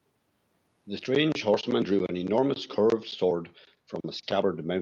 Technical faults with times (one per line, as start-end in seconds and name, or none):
2.67-2.76 echo leak